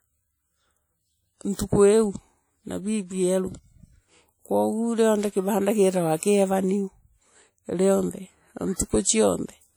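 A speech clip with plainly audible codec damage throughout. The sound rings and washes, and a hiss rises and falls with the level. That points to WMA compression as the likely cause, and the damage fits a low bitrate near 48 kbps. Long transform blocks smear the coding noise, and weak detail drops out. There is pre-echo from 1.56 to 1.59 s. A short hiss spreads about 34 ms ahead of a sharp attack. The noise meant for the loud onset leaks into the quiet gap before it, so the attack sounds soft and smeared.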